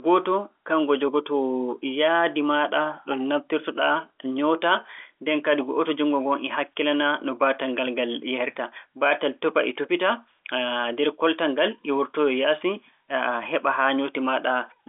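Nothing stood out on listening to this telephone-band speech.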